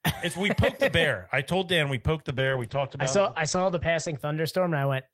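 Speech, with a call bitrate drop from 2.3 s to 4.25 s. The speech turns rough and watery, and the top end disappears as the audio bandwidth narrows from 20 kHz to 8 kHz, which fits the encoder being pushed from about 32 kbps down to about 11 kbps for roughly 1.8 s. On a spectrogram, the energy above 8 kHz is sharply cut off across that span. The waveform's envelope stays similar.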